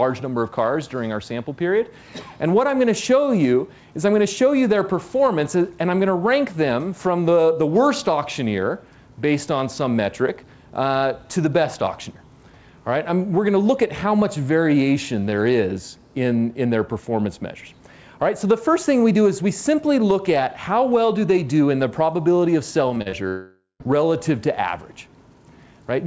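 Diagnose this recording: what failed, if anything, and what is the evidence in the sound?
Repeated packet loss (robotic sound) hit the network stage from 22.88 to 23.14 s. Four gaps, the longest 38 ms and about 100 ms in total, were patched by extending the preceding sound, so about 39 percent of that span is concealment and the audio turns choppy and robotic.

From 23.28 to 23.82 s about 0.52 s of audio is missing. The last sound is stretched out and fades, then 140 ms of silence follows before the audio resumes without the lost part. The likely cause is a long network dropout, on a call path whose band stops at 8 kHz.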